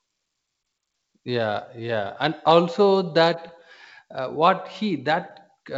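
A speech recording carried over G.722 wideband coding, which keeps it clear up to about 7 kHz, has one short pop with a rough, grainy burst at 3.48 s. It comes from bit errors on an ADPCM link at a rate of roughly 0.4 percent, which briefly throw off the decoder's step size and prediction.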